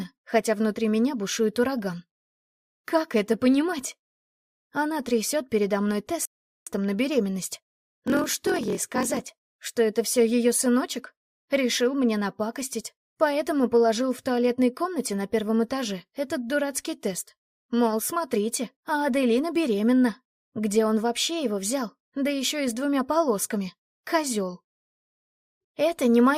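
At 6.25 s a rebuffering stall cuts the sound to silence until 6.67 s. The player ran out of downloaded audio and waited for more, then resumed exactly where it stopped, so nothing is missing, but about 0.41 s of dead air is added.

From 8.05 s to 9.53 s a padded block size mismatch sets in. One stage delivers shorter blocks than the next reads, and each block's remainder is zero-filled. The regular gaps produce a 43.1 Hz buzz, which fits a 1024-sample read block, while the audio runs at 0.938 times normal speed with its timbre kept.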